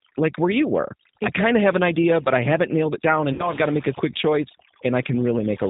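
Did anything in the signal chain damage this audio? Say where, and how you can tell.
Yes. Overdone noise removal runs through the whole speech clip, at the call-processing stage. Between phrases the background collapses to near silence dotted with twinkling specks. A suppressor set too hard pushes individual frequency bands down or off whenever they fall near its noise estimate, and the quieter parts of the speech spectrum are removed along with the noise. That leaves the gated, speckled background heard throughout.

The G.729 codec also affects the entire clip, at the codec stage, and its damage is plainly audible. The audio has nothing above 4 kHz, and the speech sounds rough and faintly synthetic. That points to an 8 kbit/s G.729 stream, probably the Annex A variant. The decoder rebuilds each 10 ms frame from a vocal tract filter, a pitch predictor and a handful of pulses, so fine detail is replaced by a rough, synthetic approximation.

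VoIP packet loss concealed by the speech codec occurs from 3.33 to 3.50 s, at the network stage, just after "haven't nailed it down" and before "I've got to make". About 60 ms of audio went missing, which fits roughly two lost packets. The decoder filled the gap by extending its last pitch and filter settings at falling gain, which produces a stretched sound that fades. The speech stays weak and distorted for a short while after packets resume because each frame builds on the one before.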